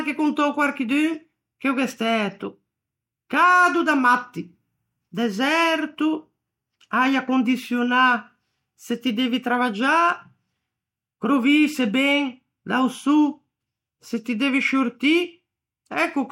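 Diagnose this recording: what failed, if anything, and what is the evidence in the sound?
Nothing failed here: listening through the whole recording, there's no sign of trouble at any stage, from the wiring and converter through to storage and playback, so there's no fault to diagnose.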